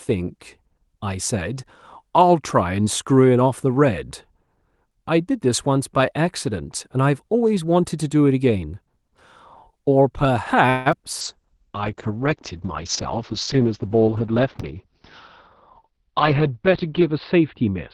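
At 10.69 s the speech stalls into a short fading buzz, lasting until 10.88 s, and then carries on from exactly where it left off, with nothing lost but about 160 ms of added gap. That is a call audio freeze. The likely cause is packets held up in transit, so the jitter buffer ran dry and the receiver stretched the last sound until the delayed audio caught up.

Right after, from 10.92 to 10.94 s, a brief smear replaces the real audio. This is short concealed packet loss: roughly 20 ms of the stream never reached the decoder in time. The receiver covered the hole by extending the preceding sound for a few milliseconds and then blending back into the genuine signal, so the moment comes across as a momentary blur.

From 11.22 s to the end the speech turns muffled and rougher, losing its brightness. This is a call bitrate drop. The Opus encoder was pushed from 32 kbps down to 9 kbps and held near the bottom for about 6 s. 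At that rate it codes the sound more coarsely and narrows the audio band from 12 kHz to 6 kHz, which removes the upper frequencies.

Within that stretch the speech twice sounds hurried while keeping its pitch. From 13.59 to 14.93 s it runs at about 108% speed, and from 15.80 to 16.25 s at about 107%. This is jitter buffer speed-up. The buffer was holding more audio than its target, so the receiver repeatedly cut out pitch-period-sized slices to shrink the delay. That removed around a tenth of a second in the first run and a few hundredths in the second.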